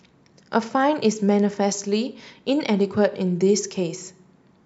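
Speech, with no audible technical faults at any point in the recording.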